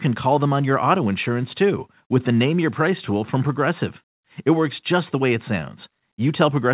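No technical faults are audible.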